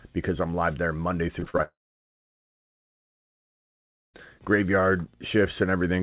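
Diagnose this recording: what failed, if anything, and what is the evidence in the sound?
The first failure is at the network stage: repeated packet loss, giving that robotic sound between 1.4 and 1.61 s. Four separate holes land in about 0.2 s, the longest around 34 ms, and roughly 42% of that stretch is patched by stretching the last bit of audio. That's why it comes out choppy, with slivers gone. Everything sits below 4 kHz, which fits a G.711 mu-law call at 64 kbps.

Right after that, from 1.63 to 4.16 s, the audio stops for about 2.5 s, so this is a long network dropout. You hear a short fading buzz or hiss of continued sound for about a tenth of a second, then near-silence for about 2.4 s, and the audio picks up again further on with that whole chunk missing. The likely cause is a sustained run of packets that never reached the receiver, so there was nothing to play.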